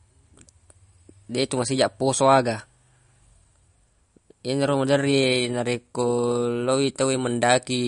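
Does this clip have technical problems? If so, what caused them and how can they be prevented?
Yes. Throughout the speech there's a hard ceiling: nothing above about 10.6 kHz. The sibilants have a swirly, watery edge, which points to heavy MP3 compression, likely at a low bitrate of roughly 40 kbps. With bits that scarce, the encoder cuts the treble at a fixed point and drops the quieter frequency lines, which then flicker in and out from frame to frame. To prevent it, keep a lossless master and encode at a much higher bitrate.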